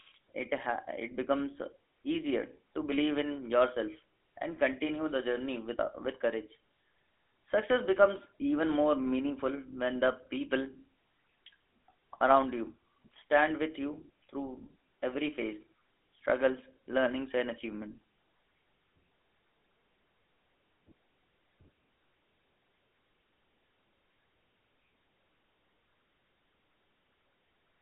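Right through the clip the speech carries GSM full-rate codec damage, and it's plainly audible. The coder rebuilds the voice from a coarse pulse excitation, so everything sounds buzzy and gravelly. The band sits around 250 Hz to 3.7 kHz, with nothing above 3.8 kHz, which fits the 13 kbps full-rate mode.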